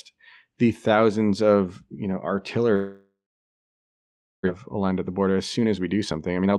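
A speech recording in which, from 2.75 to 4.49 s, the sound stretches into a fading buzz and then drops to about 1.3 s of silence, a likely long network dropout. Roughly a second of audio never returns. On a spectrogram this shows as a smeared, decaying tail followed by an empty band, and on the waveform as a flat gap. From 4.77 to 6.58 s a jitter buffer speed-up plays the audio at 118% speed to shed roughly 0.3 s of built-up delay. The result sounds hurried while the pitch holds, and a spectrogram shows compressed syllables with unchanged harmonic spacing, all below the Opus call path's 12 kHz ceiling.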